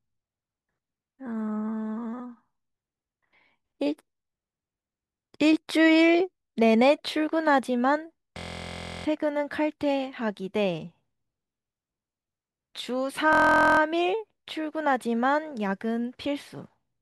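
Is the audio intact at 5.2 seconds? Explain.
Yes, the audio at 5.2 seconds is intact, with no dropout, click, distortion or other fault at that point.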